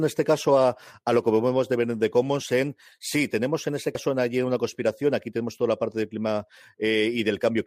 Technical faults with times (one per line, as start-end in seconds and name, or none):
3.95 damaged data in a compressed stream